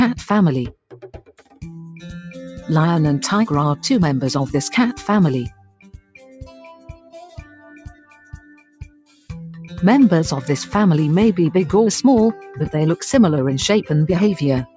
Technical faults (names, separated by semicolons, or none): noise suppressor applied to music or sounds; sound cut by the noise suppressor